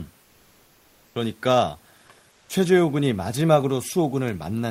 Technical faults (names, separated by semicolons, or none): comfort noise in place of the background